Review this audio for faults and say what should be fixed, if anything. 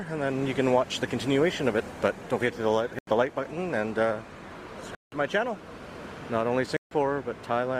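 Adaptive stream starting at a low bitrate, 0.0 to 6.0 s. For the first six seconds the treble is thin or has a synthetic, smeared quality, and codec artefacts are stronger. At 6.0 s the quality jumps up in one step with no gap. The player began on a cheap version of the stream to start quickly, then switched up once it had measured the connection. The sound fits roughly 24 kbit/s Opus stepping up to 64 kbit/s. To prevent it, start on a higher rendition, or hold playback briefly until a bandwidth estimate is available.

Block of digital silence at 2.99 to 3.07 s (85 ms), 4.95 to 5.12 s (171 ms) and 6.77 to 6.91 s (145 ms). Each time the sound drops to silence and returns without any fade, and the gap is heard as a short hole. The output buffer was likely not filled in time and was played as zeros. The first two lengths fit blocks of 4096 and 8192 samples. To prevent it, use larger buffers or higher thread priority so the audio callback always delivers data before its deadline.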